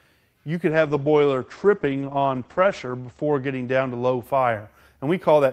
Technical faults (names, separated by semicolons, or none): call bitrate drop